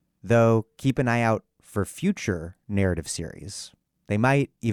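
No technical faults are audible anywhere in this speech recording.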